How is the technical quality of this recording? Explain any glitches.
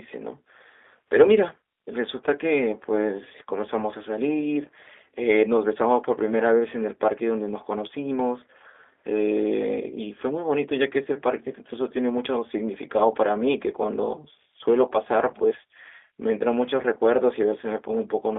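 The recording is clearly degraded by a low-bitrate telephone codec for its whole length.

G.729 codec, throughout: the speech sounds rebuilt from a vocal tract filter, a pitch predictor and sparse pulses, consistent with roughly 8 kbit/s G.729A. Only about 300 Hz to 3.6 kHz survives, so it sounds muffled and thin, with plainly audible roughness and a synthetic, buzzy edge.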